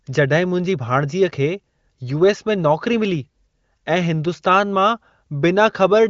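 No technical faults occur in this speech, which comes through an AMR wideband (HD Voice) path at 23.05 kbit/s with nothing above about 7.3 kHz.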